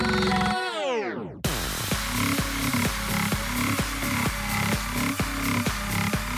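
No faults detected anywhere in the audio.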